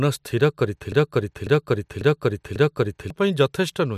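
Speech runs normally until 0.92 s, then falls into a broken-record loop. A fragment about 0.55 s long repeats exactly, back to back, four times. The loop holds until 3.10 s, so just over two seconds of the recording go missing. The repeats are identical, with no fade or variation. That points to a stall. The player, encoder or stream likely stopped receiving new audio and kept replaying the last piece it held.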